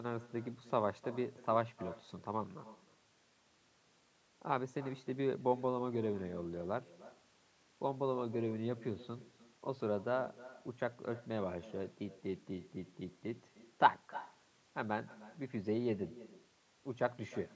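A speech recording with echo with no canceller running the whole way through: every phrase comes back roughly a third of a second later, about 18 dB down, thin, as the far end's loudspeaker feeds its microphone. The audio stops at 8 kHz, which is just the call's microphone processing.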